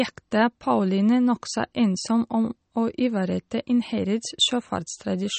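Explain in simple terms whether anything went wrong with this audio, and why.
The speech sounds watery and muffled throughout, with nothing above 8.4 kHz. The likely cause is heavy MP3 compression discarding detail to save space.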